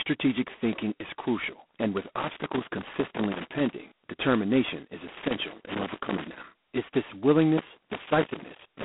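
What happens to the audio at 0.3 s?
At 0.3 s you're hearing G.726 ADPCM damage, which runs through the whole clip: a harsh, rasping hiss riding on the speech and rising with its level, which fits the 16 kbit/s mode, where only two bits per sample code the prediction error. The band is telephone-narrow, about 200 Hz to 3.4 kHz, with nothing above 3.8 kHz.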